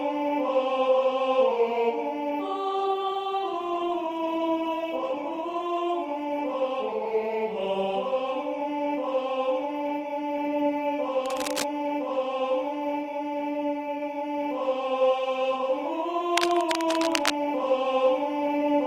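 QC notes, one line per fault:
2.81–9.31 s, call bitrate drop: the top end closes from 20 kHz to about 12 kHz and the sound turns coarse and watery, bottoming out for about 2.1 s, which fits an encoder rate cut from roughly 48 to 14 kbps.
11.25–11.63 s and 16.37–17.31 s, cable scratch noise: dense, uneven scratching bursts over the sound, about 10 dB below the signal, then only about 5 dB below; likely a worn cable or connector being moved.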